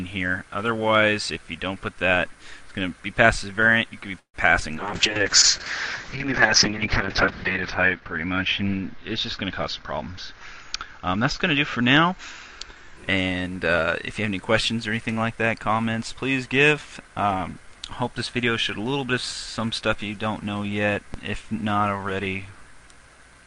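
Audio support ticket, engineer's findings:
Call audio freeze, 4.19–4.36 s: packets held up in transit, likely draining the jitter buffer. Receiver stretched the last sound into a fading buzz, silent for the final 0.1 s, then resumed where it stopped. About 147 ms of gap inserted, nothing lost.

Short concealed packet loss, 4.60–4.63 s: about 20 ms of audio missed the decoder deadline. Concealment extended the preceding sound and blended back, heard as a brief smear or wobble where a short transient may have dropped out.

Call bitrate drop, 4.77–13.03 s: bandwidth estimate collapsed and the Opus encoder fell from 48 kbps to 6 kbps, bottoming out for about 2.4 s. Coarser coding, and audio bandwidth cut from 20 kHz to 8 kHz. The result is rough, watery, muffled sound until recovery.

Jitter buffer speed-up, 9.80–10.41 s at 110% and 10.93–12.13 s at 106%: buffer overfilled after a delay backlog. 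The receiver trimmed pitch-period slices repeatedly, about 70 ms per stretch. Audio runs noticeably fast at unchanged pitch and sounds hurried.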